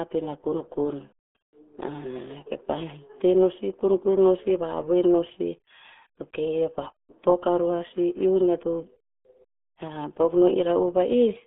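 Muffled, gargly speech runs from start to finish, boxed into a narrow band of roughly 250 Hz to 3.6 kHz with nothing at all above 3.7 kHz, and every syllable carries a bubbling, smeared texture. That is the signature of the RealAudio 14.4 codec, the old RealAudio 1 dial-up format. Its heavy damage fits a very low bitrate of about 8 kbit/s, where the coder strips away the upper spectrum and models the rest so coarsely that the sound turns watery.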